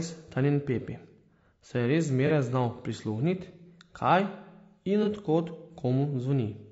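Throughout, the speech sounds rough and grainy, with noise between the harmonics and a thin, synthetic top band. The likely cause is low-delay AAC compression, AAC-ELD. Its short frames resolve pitch harmonics poorly, and the damage fits a low bitrate around 32 kbps.

At 2.27 to 2.32 s, and again at 5.03 to 5.08 s, a brief smeared, noisy patch replaces the sound. This is AAC frame loss with concealment. About 30 ms went missing each time, fitting one lost frame. The decoder rebuilt it from the previous spectrum.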